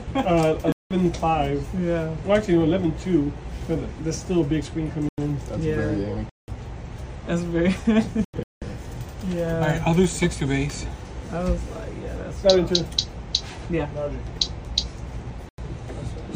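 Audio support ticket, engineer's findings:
Abrupt dropouts to silence at 0.72–1.09, 5.07–5.18, 6.22–6.48, 8.25–8.67 and 15.49–15.58 s, each 0.1 to 0.4 s long, with no timing shift. Corrupt frame muted: the decoder rejected bit-damaged compressed frames, and the player filled each rejected run with silence.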